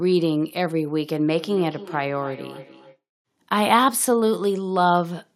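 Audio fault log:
1.36–3.0 s, feedback echo between two devices: the speech comes back on itself at a steady interval of roughly a third of a second, each return thinner and more ringing than the sound before it, peaking at about 18 dB below the direct speech. This points to a second device in the same room playing the call aloud, so this microphone picks up its own sound again, which the local echo canceller never removes because it only subtracts what its own device plays.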